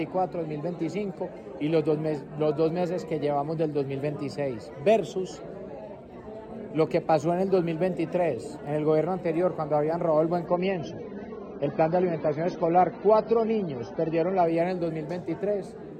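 From 10.47 s to 14.47 s the adaptive stream drops to a lower bitrate, a step down that points to a rendition of roughly 24 kbit/s after about 96 kbit/s. With fewer bits to spend, the encoder discards the upper band, so nothing remains above 6.3 kHz and the sound turns dull and watery, with codec artefacts more exposed. The change arrives abruptly without any gap, and the full treble snaps back at 14.47 s.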